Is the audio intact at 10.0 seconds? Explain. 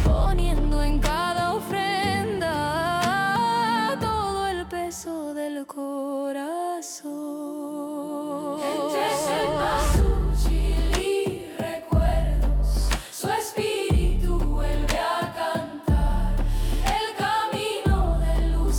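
Yes, the audio is intact at 10.0 seconds, with no fault audible at that moment.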